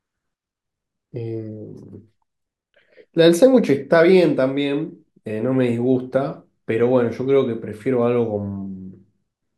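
Nothing in the speech recording stood out as a fault on listening.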